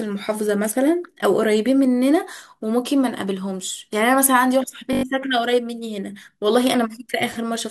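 Bluetooth stutter at 4.93 to 5.03 s: packets arrived lost or late, so the receiver looped its last short buffer, giving a rapid buzzing repeat for about 0.1 s, which fits a handful of dropped packets. The speech then resumes further along, that stretch missing.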